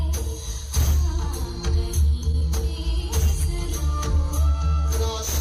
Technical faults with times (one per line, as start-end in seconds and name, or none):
2.31-2.43 short concealed packet loss